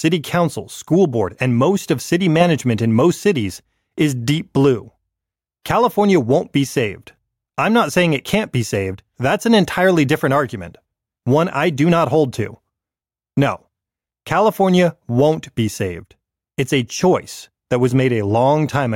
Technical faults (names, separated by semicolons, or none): none